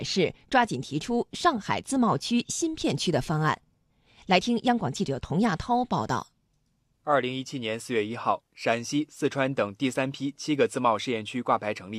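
Speech recording, with nothing technically wrong with it.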